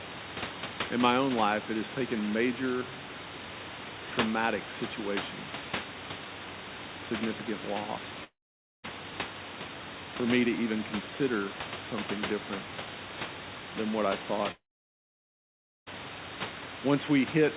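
At 8.24 s the speech stops abruptly. A brief buzzy tail of the last sound fades, then silence runs to 8.85 s. About 0.6 s of audio is gone. At 14.51 s it happens again, for longer. The tail fades quickly and silence holds until 15.88 s, losing about 1.36 s. Speech resumes mid-flow each time, with nothing replayed. The likely cause is a long network dropout, where the receiver extends the last sound and then gives up.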